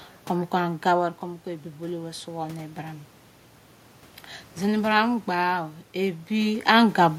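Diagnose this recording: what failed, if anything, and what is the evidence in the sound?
Automatic gain rising, in the call processing stage: from 1.2 s to 3.1 s the voice and the room noise swell together by about 4 dB. The AGC saw the input fall by about 11 dB and slowly raised its gain to compensate.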